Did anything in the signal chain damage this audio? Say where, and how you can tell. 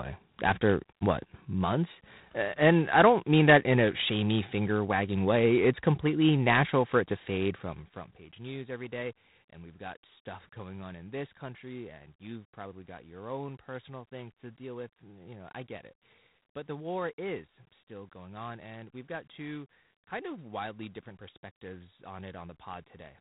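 Yes, at the codec stage, throughout. This is G.726 ADPCM damage. The speech carries a harsh, rasping hiss that rises and falls with its level, and nothing passes above 3.8 kHz. That roughness points to the 24 kbit/s mode, whose coarse difference coding leaves audible quantisation noise.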